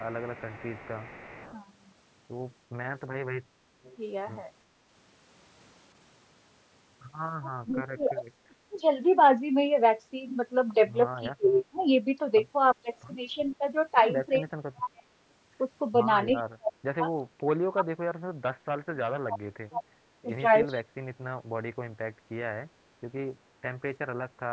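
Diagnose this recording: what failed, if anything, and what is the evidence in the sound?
A faint, delayed copy of the voice trails the talker from 0.00 to 1.57 s, again from 3.84 to 3.97 s, and in brief scraps at 11.52 and 16.37 s. It arrives 347 ms late, roughly 25 dB down (fainter at 3.84 s). This is an echo leak in call processing, likely from a loudspeaker-side echo canceller that let residual far-end pickup through.

From 3.43 to 3.78 s the room tone dips by about 7 dB for under half a second, then recovers. This is background gated by the echo canceller, which pulled the microphone down while the loudspeaker was playing and released it afterwards.

The talker's voice drops away hard, by around 35 to 40 dB, from 7.41 to 8.87 s, in pieces across 11.2 to 21.23 s, and again from 24.44 s to the end. This is speech suppressed in double talk, likely the canceller muting the near talker while the far side spoke.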